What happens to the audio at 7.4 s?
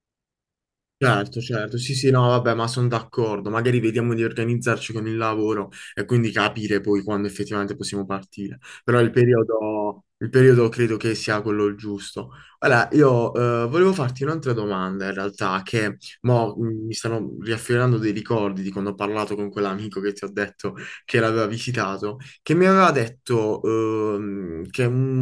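Nothing goes wrong at 7.4 s; the speech carries on intact through that moment, with no dropout, click or other fault.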